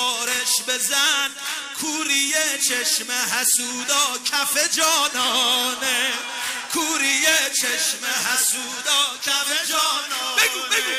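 The audio has compressed frames skipped at 1.05–1.07 s and 9.45 s, jumping ahead by about one and then two frames, consistent with roughly 23 ms decoder frames.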